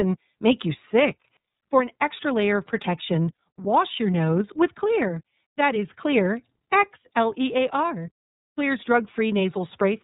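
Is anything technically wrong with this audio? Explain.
Yes. The speech has passed through the iLBC codec throughout. Nothing above 4 kHz survives, so it sounds narrowband. The coding damage is plainly audible as a rough, slightly synthetic edge. This fits 30 ms frames at about 13.33 kbps.

Lost iLBC frames cause two brief dropouts, at 3.35–3.38 s and 7.03–7.05 s. The first falls between "extra layer of protection" and "wash your nose with". Each fits one missing 30 ms frame. The decoder fills the gap by repeating the last pitch cycle with noise, giving a short buzzy held sound. The speech recovers at once.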